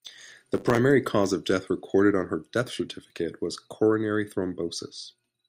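From the start to 0.78 s, the speech has a block size mismatch (truncated). One stage writes longer blocks than the next stage takes in. The tail of each block is dropped, which fits blocks of 512 samples being cut short. Each cut leaves a seam. The seams repeat at 100 Hz and form a steady buzz. The lost samples also make the speech run 1.07 times fast. The timbre stays the same.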